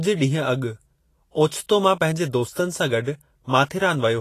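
Speech clip carrying audible Vorbis compression throughout: the treble sounds hissy and grainy, with roughened tones and softened consonant attacks, most likely from low-rate Vorbis encoding around 33 kbps. A spectrogram would show nothing above 14.2 kHz and a speckled, noisy upper band.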